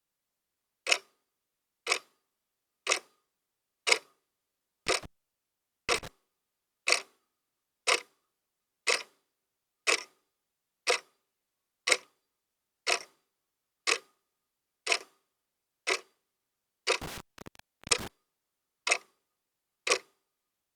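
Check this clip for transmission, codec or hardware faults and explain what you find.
There is a hardware fault: intermittent contact, at 4.87–6.08 s and 17.02–18.08 s. A loose connection briefly opens, so the sound crackles and drops out for about 0.83 s and 0.74 s respectively.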